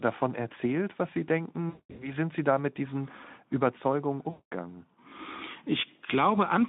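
From 1.69 to 2.14 s and again from 4.30 to 4.54 s, VoIP packet loss concealed by the speech codec stretches the narrowband sound into a buzzy tone or coloured noise that fades, extrapolated from the last pitch and filter, with weak, distorted audio lingering briefly after each gap.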